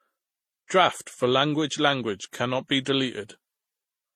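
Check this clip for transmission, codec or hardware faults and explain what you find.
One fault runs through the whole speech clip: transcoding between lossy codecs. It is present throughout and is likely the result of MP3, then Vorbis, then HE-AAC encoding at low bitrates, which layers the different codecs' artefacts together. A spectrogram would show a hard high-frequency cut-off with blotchy, gappy upper bands.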